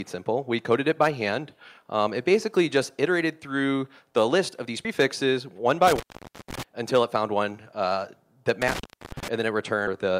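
At 4.85 s the audio jumps ahead: compressed frames were skipped, roughly two of them, losing about 70 ms of material. The step size fits a codec working in 32 ms frames. On a waveform the envelope shifts abruptly with no gap. A spectrogram shows a vertical seam where the harmonic patterns fail to continue smoothly.

From 5.87 to 6.63 s, and again from 8.62 to 9.28 s, an intermittent contact breaks the signal, as a loose cable or plug momentarily opening. The line is open for 510 ms the first time and 328 ms the second. Each dropout begins and ends with crackle, and faint hiss remains while the contact is open. On the waveform this appears as a near-flat stretch bordered by jagged spikes. A spectrogram shows dark bands framed by scattered broadband specks.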